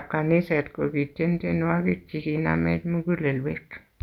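No technical faults can be heard anywhere in the speech.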